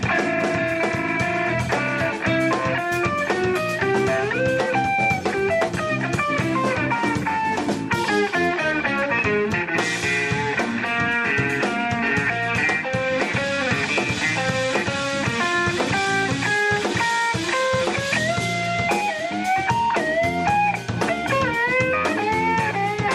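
No technical faults can be heard in this audio, and the signal carries through without interruption, distortion or level problems.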